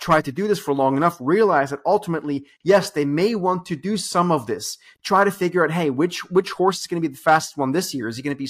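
A short recording of speech, with no technical fault anywhere in it. There is nothing to time or trace to a cause.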